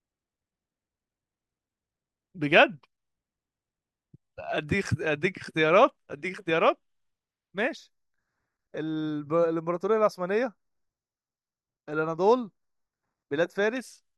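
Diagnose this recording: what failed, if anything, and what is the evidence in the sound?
Channel delay (comb filtering) runs from 7.77 s to 13.77 s. At the driver or buffer stage, one channel lags the other by a fraction of a millisecond before the mono sum. Shared content cancels at evenly spaced frequencies, the first near 3 kHz, so the speech turns hollow and phasey.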